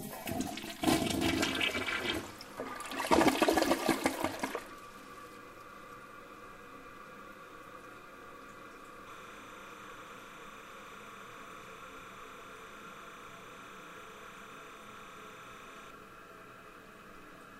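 Timecode bleed runs from 9.1 to 15.9 s. Linear timecode at 30 frames per second leaks in from an adjacent track or cable. Its square wave flips between roughly 1 kHz and 2 kHz, giving a steady chirping warble roughly 15 dB below the sound.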